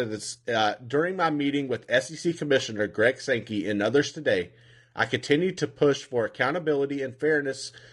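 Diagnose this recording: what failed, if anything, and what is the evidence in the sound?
The fault sits at the codec stage and runs through the whole speech clip as low-delay AAC compression. The voice sounds rough and grainy throughout, with a hiss filling the gaps between harmonics and a thin, synthetic-sounding top band. The likely cause is AAC-ELD coding at a bitrate that fits around 32 kbps, where short frames smear the harmonic structure. A spectrogram would show blurred, noisy harmonic lines and a patchy upper band.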